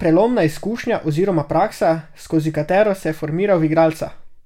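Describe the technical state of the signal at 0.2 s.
At 0.2 s the signal is intact, with no audible technical fault at that moment.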